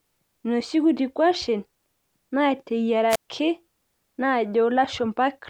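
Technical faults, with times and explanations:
3.09 to 3.29 s, wireless microphone squelch dropout: the mic's FM radio link fades, so you get a quick rise of hiss, then the receiver's squelch gates the output to near silence for about 132 ms before the speech returns.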